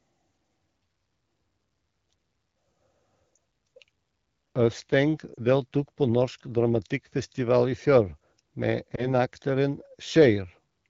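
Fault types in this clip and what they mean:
Lost AMR speech frames: at 3.36 s, 5.33 to 5.41 s just before "deltok på", and 8.95 to 9.07 s, frames that failed their checksum were filled by reusing the last good pitch and vocal tract settings at falling gain, heard as brief dips or warbles.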